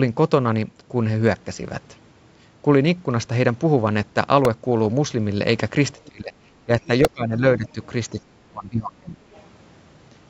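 At 4.45 s there's a tiny repeated buffer: a slice of about 1.45 ms, which fits a 64-sample buffer, gets played twice more because fresh audio didn't turn up in time. With a piece that small you don't hear a stutter, just a quick click or buzzy tick where the hard joins are. The same thing happens again at 7.05 s.

From 5.96 to 6.34 s the speech sinks sharply, by something like 25 dB at its lowest. That looks like speech suppressed in double talk, likely because both ends were talking at once and the echo canceller ducked the near talker along with the echo. It comes back in patches: a smaller dip around 6.65 to 6.70 s, another deep one from 6.87 to 7.42 s, and a shallow one from 7.58 to 7.77 s.

Overlapping that last dip, from 7.66 to 7.86 s, you can catch the other side's voice leaking through faintly, roughly 30 dB under the main speech. Most likely the far end was playing on a loudspeaker and the echo canceller didn't strip all of it from the mic.

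The worst suppression runs from 8.13 to 9.20 s, where the talker drops by about 30 dB for around a second. Right after it, at 9.33 to 9.41 s, there's another short scrap of leaked far-end voice. All of this sits inside the usual call-processed band, with nothing above 8 kHz.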